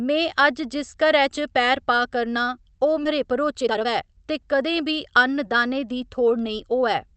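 A speech recording, heard through a call path whose top end stops around 8 kHz, consistent with Opus at roughly 32 kbps. At 3.05 to 3.07 s there's a skip ahead: about 0.7 s of audio got dropped while later audio was already queued, so playback lurches forward with no gap. Then from 3.18 to 5.04 s the jitter buffer speed-up kicks in, shaving off short pitch-period chunks, about 0.4 s in total. The speech runs about 118% fast at normal pitch and sounds rushed.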